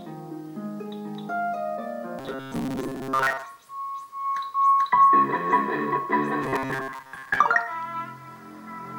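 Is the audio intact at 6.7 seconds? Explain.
No, from 6.42 to 7.40 s there's robotic sound from repeated short buffers: most of the audio is skipped while a roughly 7.5 ms chunk likely loops, giving a stiff, metallic 133 Hz buzz.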